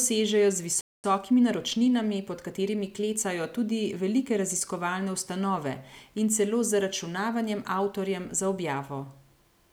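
At 0.81 s the player most likely ran dry of buffered data or had its output thread held up, producing a playback stall: the speech cuts off mid-flow and silence lasts about 230 ms, until 1.04 s, before the sound resumes where it broke off.

From 1.04 s to 3.32 s the player works off the backlog through time-compressed catch-up, trimming small slices and cross-fading across the joins. The speech runs about 1.1 times faster, hurried yet at unchanged pitch.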